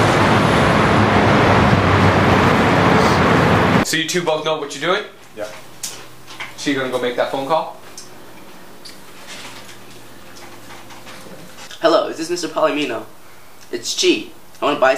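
Chunks out of order at 9.36 s: one short block of about 5.8 ms arrived one chunk late and played after the block that should have followed it. Nothing is missing, but the swapped order leaves three hard joins, heard as a tiny jumbled flicker.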